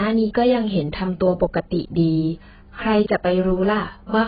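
Heavy AAC compression at a very low bitrate, likely AAC-LC, runs through the whole of this speech clip. Starved of bits, the encoder has pulled its bandwidth down so that nothing survives above about 4.8 kHz, which fits a rate of roughly 14 kbps. The speech sounds dull and muffled from start to finish, and the thin remaining detail is smeared by the coarse quantisation into a warbling, fizzy texture.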